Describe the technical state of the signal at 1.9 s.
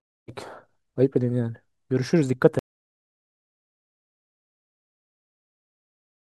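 At 1.9 s the speech signal is intact, with no fault audible at that moment.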